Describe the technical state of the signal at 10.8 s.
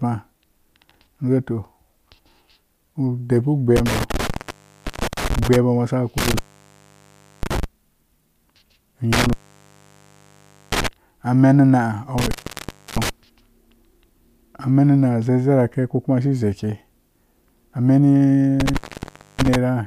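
At 10.8 s the speech is inside an intermittent contact fault running from 9.13 to 10.88 s, right at its closing edge. A loose connection in the signal path opens, and for about 1.4 s of that span the speech drops out, leaving faint hiss, with crackle where the contact breaks and remakes. On a waveform this shows as a near-flat gap bracketed by sharp spikes. A spectrogram shows a dark low-level band with thin vertical broadband streaks at each edge.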